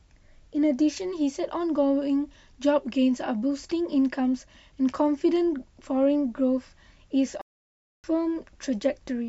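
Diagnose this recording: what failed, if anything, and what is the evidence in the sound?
Playback stall, 7.41 s to 8.04 s: the speech cuts off mid-flow and the output drops to silence for about 0.63 s before sound returns. The stage is playback. A gap this long, with the sound simply stopping into silence, likely means the player's buffer ran dry or its audio thread was blocked. Output halted until data was available again, leaving a plain hole in the speech.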